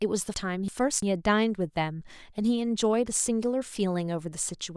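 Speech with chunks out of order between 0.34 and 1.02 s: a 341 ms block arrives one chunk late, swapping places and producing a jumbled moment with hard joins at 0.34, 0.68 and 1.02 s. A spectrogram shows formant tracks breaking at vertical edges there.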